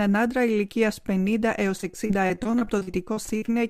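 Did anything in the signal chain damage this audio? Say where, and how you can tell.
Yes, the damage happens in the network. From 1.77 s to 3.50 s the sound turns choppy and robotic: repeated packet loss. There are about twenty short holes, the longest around 42 ms, each patched by stretching the previous sound, so roughly a quarter of that span is concealment. The smeared fill distinguishes it from a buffer underrun, which leaves plain dropouts rather than repeated sound.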